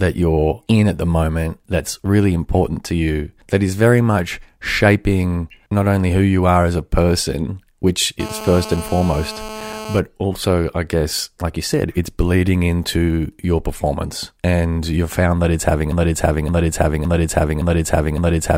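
GSM phone buzz runs from 8.2 to 10.0 s in this speech recording: a hard, raspy tone near 217 Hz, rich in harmonics and about 12 dB below the speech, held steady as during a call, because nearby 2G transmitter pulses were rectified by the audio circuitry. A broken-record loop starts at 15.92 s and lasts to the end, with one 0.56 s fragment repeating exactly five times back to back, likely from a stalled player, encoder or stream resending its last buffer, so the intended audio there is lost.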